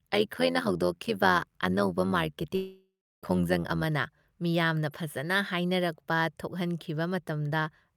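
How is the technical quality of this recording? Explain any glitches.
The technical quality is poor, with two clear faults in the speech.

From 0.00 to 3.85 s, just before "ꯃꯤꯌꯥꯝꯅ ꯐꯖꯅ", there is overlap-add ripple. Frames rejoined with mismatched overlap make the level pulse by about 11 dB at around 100 Hz, a metallic buzz with extra tones around the voice rather than random crackle.

From 2.55 to 3.25 s, the audio likely suffers a long network dropout. About 0.68 s is missing. The last sound is stretched into a fading buzz, then about 0.32 s of silence follows, unlike a brief click-like packet gap.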